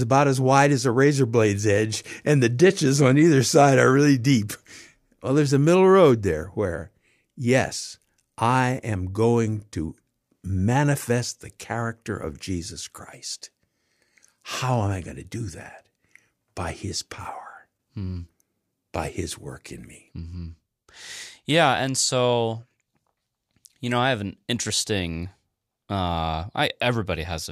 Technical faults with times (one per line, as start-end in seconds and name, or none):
none